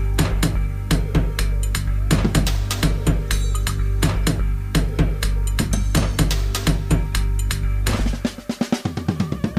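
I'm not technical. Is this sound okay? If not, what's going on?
No. Low bit depth with dither runs throughout: the sound is stored with only 9 bits, and added dither turns the rounding error into a steady, even hiss.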